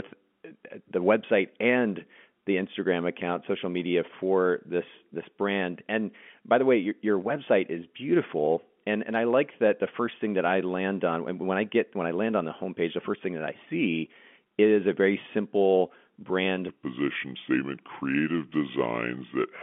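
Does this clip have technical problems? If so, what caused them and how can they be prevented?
Yes. From 16.69 s through to 19.62 s there's a section at the wrong speed. The speech slows to about 0.75x, so it drags and sits roughly five semitones lower. That's likely the section being played or edited against the wrong clock, which shifts speed and pitch together. To prevent it, make sure every device and edit in the chain runs at the same sample rate as the original recording.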